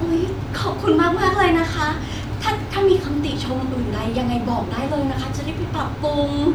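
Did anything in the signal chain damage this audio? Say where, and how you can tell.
No, nothing stood out as damage from any stage of the chain when listening to this speech recording.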